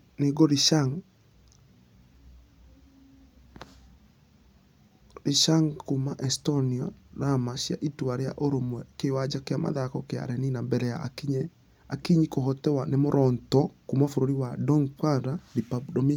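Listening closely to the speech, nothing stood out as a technical fault at any point.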